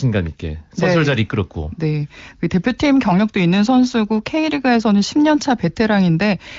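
No technical faults can be heard in this speech, which is carried over an AMR wideband (HD Voice) codec.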